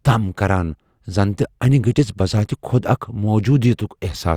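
No technical faults are audible anywhere in the recording.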